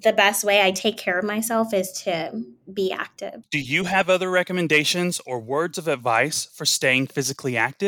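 Nothing to report: no technical faults are audible at any point in the speech recording.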